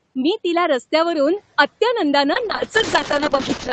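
Noise suppressor artifacts run through the whole speech clip. The suppressor pulls down whatever bands it judges to be steady noise, frame by frame, by about 14 dB, so the background dips in the gaps and comes back up under the speech. On a spectrogram the noise floor looks blotchy and patchy between syllables rather than an even haze. The waveform shows quieter gaps that swell again beneath each word.

From 2.34 s to the end there is a call bitrate drop. The Opus stream sounds coarser, which fits the encoder being pushed from about 32 kbps down to roughly 6 kbps. It stays at that low setting for the last 1.39 s. Speech turns rough, muffled and watery, and the room noise rises by about 10 dB around two and a half seconds. A spectrogram shows the 8 kHz band edge collapsing to a much lower cut-off, with the upper harmonics replaced by sparse, blocky patches.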